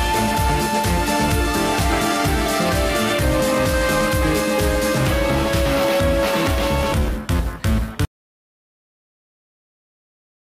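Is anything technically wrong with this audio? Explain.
Yes. An audio dropout to silence begins at 8.05 s and runs to the end, about 2.4 s. The input was likely lost through a disconnected device, failed link or stray mute while recording continued. The sound cuts off abruptly into blank silence with no room tone, unlike a fade or natural pause.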